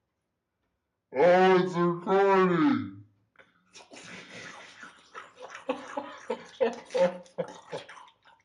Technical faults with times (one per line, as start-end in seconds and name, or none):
0.00-8.45 wrong sample rate